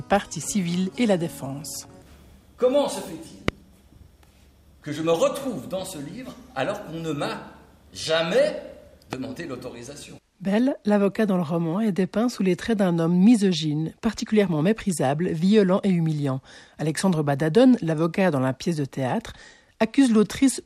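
A sharp pop jumps out at 3.48 to 3.51 s, far louder than the surrounding sound, and a weaker one at 9.13 to 9.15 s. These loud pops are likely brief voltage pulses added to the signal, with the sound carrying on beneath them.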